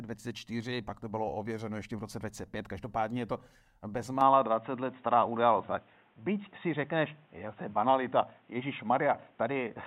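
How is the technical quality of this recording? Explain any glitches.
One glitch affects this speech recording. From 4.21 s to the end, the input likely switched to a poorer device: everything above 3.8 kHz vanishes, so the sound turns dull, with a small level shift and faint new background noise.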